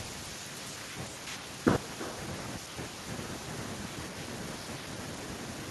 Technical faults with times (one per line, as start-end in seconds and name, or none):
0.00-5.71 echo with no canceller